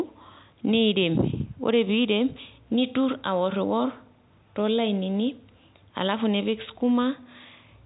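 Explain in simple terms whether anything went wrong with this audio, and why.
Nothing went wrong here: the speech just sounds like an ordinary phone call, because the call's microphone processing trims the lowest bass and the standard G.711 telephone coding keeps nothing above about 3.9 kHz, which is exactly how a landline line is meant to sound.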